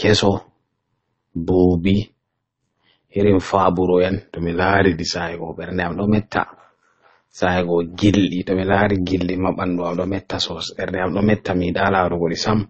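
Frames of this speech recording were windowed and overlap-added with a gain that doesn't sum flat, so overlap-add ripple runs throughout: the level swings by about 11 dB at around 100 Hz, giving a metallic buzz with extra tones around the voice. The audio was likely encoded more than once, as transcoding between lossy codecs, with the character pointing to a low-rate MP3 pass followed by low-rate AAC-LC. Nothing remains above 8.3 kHz, and the artefacts from both stages are heard together. From 4.12 s to 5.16 s a drift correction step likely pulled the playback rate down to rebalance a clock buffer. The audio runs 5.32% slow and drops about 95 cents, nearly a semitone.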